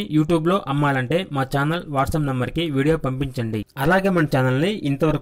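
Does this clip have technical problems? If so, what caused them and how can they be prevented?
No, nothing in this clip stood out as a technical problem on listening, so there is nothing here that calls for prevention.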